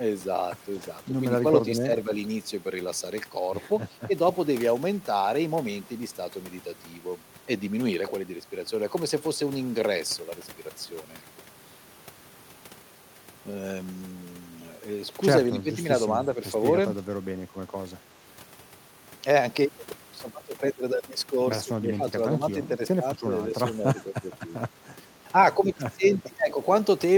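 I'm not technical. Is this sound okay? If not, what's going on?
No. The speech briefly dips or partly cuts out at 1.67–1.91 s, 4.07–4.12 s, 15.48–15.8 s, 17.06–18.14 s and 21.79–25.02 s. This is speech suppressed in double talk. Likely both people spoke at once, and the call's echo remover mistook this voice for echo and turned it down.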